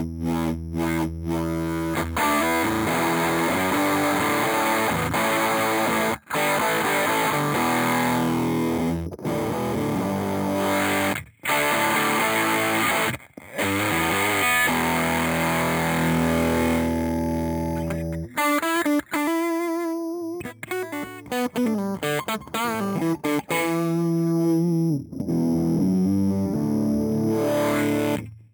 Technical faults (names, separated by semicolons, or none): imaging from sample-and-hold upsampling